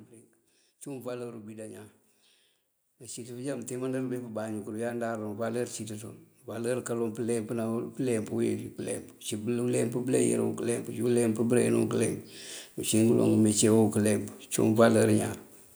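Automatic gain rising from 2.98 to 5.78 s, then again from 6.45 to 8.66 s: the gain control judged the input too quiet and raised its gain gradually, by about 7 dB and then about 5 dB, so speech and background swell together over a couple of seconds.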